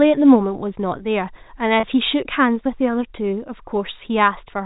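Packet loss with pitch repetition appears in this speech recording from 1.80 to 1.83 s: a gap of about 30 ms, which fits a single lost packet, is bridged by the receiver looping the last pitch period it decoded. Because the gap is so short, the concealment comes across as a brief held, slightly buzzy tone rather than a dropout, before normal speech resumes. The line is G.711 telephone coding, so nothing above 4 kHz is present.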